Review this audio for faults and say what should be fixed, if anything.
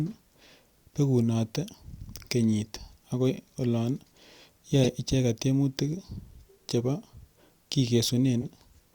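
You've got two corrupt frames decoded here: a short burst at 4.83 to 4.86 s spanning a few frames, and a quieter blip at 8.41 to 8.45 s from what sounds like a single frame. Flipped bits sent misread energy to the wrong frequencies, and the decoder played it anyway. To prevent it, add checksums or error detection so damaged frames get concealed instead of played.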